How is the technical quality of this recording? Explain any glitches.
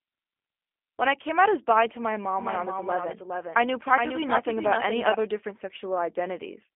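The quality is poor: narrowband codec damage runs throughout, and a duplicated copy of the audio overlaps part of the speech.

G.729 codec, entire clip: speech is rebuilt from a filter, pitch predictor and sparse pulses, which fits 8 kbit/s G.729, so it sounds rough and synthetic. A spectrogram shows nothing above 3.6 kHz.

Doubled audio track, 2.39 to 5.15 s, starting just after "as bi to my": a second copy about 5 dB quieter trails roughly 0.4 s behind, likely from a slower capture path. It starts and stops abruptly, with no room decay. The waveform shows overlapping, offset repeats of each syllable.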